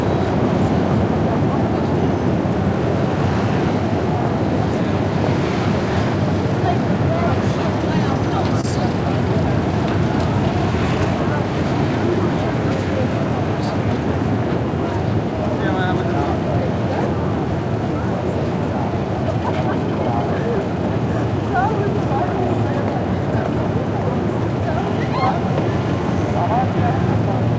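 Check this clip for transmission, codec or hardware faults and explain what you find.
One transmission fault stands out, heard against a call path that shows nothing above 8 kHz, which fits the G.722 wideband codec.

From 8.61 to 8.64 s there is a brief smear in the sound, where the audio blurs before settling back. This is short concealed packet loss: about 20 ms of audio arrived too late, so the receiver extended the preceding sound for 24 ms to cover the gap, then crossfaded into the real signal.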